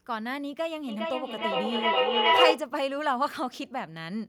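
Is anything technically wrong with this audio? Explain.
Yes. From 0.88 to 2.68 s the speech comes back in thin, ringing repeats roughly every 0.4 s, building until they peak about 8 dB above the speech. This is feedback echo between two devices: each microphone recaptures the other's playback, which neither echo canceller removes.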